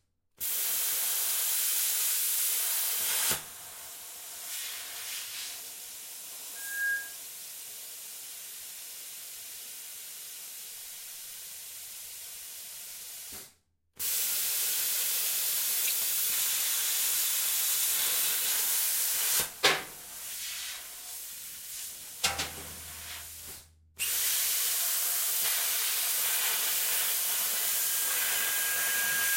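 A microphone was picking up its own loudspeaker, letting loop gain pass unity at 1.6 kHz: loudspeaker feedback squeal. A single 1.6 kHz tone swells within a few tenths of a second from 6.55 to 7.18 s, then again over roughly 1.5 s from 27.54 s to the end, each time around 5 dB above the sound.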